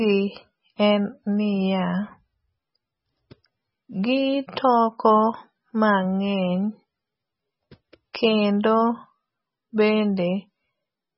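Throughout the recording, the speech carries heavy damage that sounds like MP3 compression, most likely from encoding at a very low bitrate, roughly in the range of 16 kbps. Nothing survives above about 5.6 kHz, so the top is dull and muffled. Starved of bits, the encoder zeroes weak frequency lines that flicker on and off between frames, giving a watery, swirling texture to sustained sounds. A spectrogram shows a hard ceiling at 5.6 kHz and patchy, blotchy energy below it.

At 8.13 s, pre-echo appears. A sharp attack landed late in a codec block, and the quantisation noise sized for that loud moment was spread back across the quiet stretch before it, smearing about 15 ms of short hiss ahead of the onset. The attack itself loses its crispness and sounds soft. On a waveform, a haze of noise rises just before the transient in what should be a quiet moment. A spectrogram shows a smudge of noise leading the attack.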